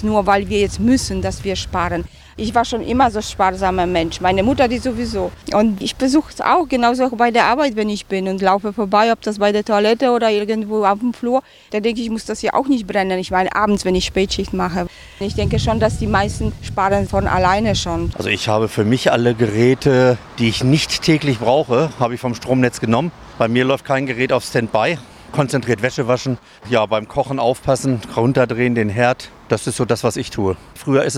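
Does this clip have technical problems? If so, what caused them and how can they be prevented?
No, nothing in this clip stood out as a technical problem on listening, so there is nothing to trace back or prevent.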